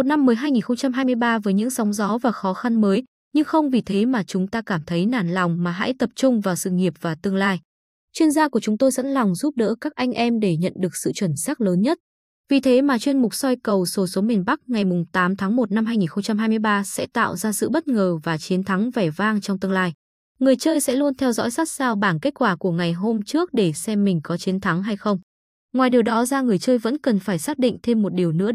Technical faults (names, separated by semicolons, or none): none